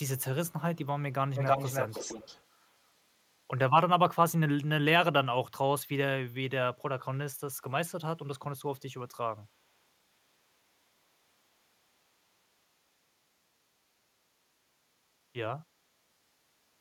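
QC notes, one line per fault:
0.18–0.24 s, 0.48–0.53 s and 2.60–2.67 s, echo leak: short scraps of a copy of the speech return 321 ms late. They are very faint, around 35 to 40 dB below the speech. This is likely a far-end echo canceller letting small remnants of loudspeaker pickup slip back into the call.
1.35–2.43 s, echo leak: the same 321 ms delayed copy returns for over a second at only about 5 dB below the speech, heard as a clear doubled repeat trailing the main sound.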